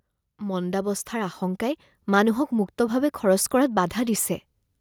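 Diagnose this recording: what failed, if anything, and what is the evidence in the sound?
From 0.38 s to 1.93 s the speech and the background noise swell together, climbing about 6 dB over roughly a second and a half. This is automatic gain rising in the call processing stage: the gain control judged the input too quiet and ramped its gain up slowly.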